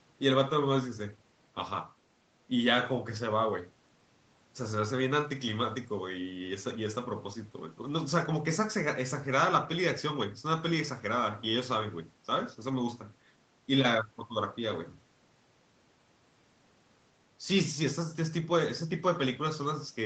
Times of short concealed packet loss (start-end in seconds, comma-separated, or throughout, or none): none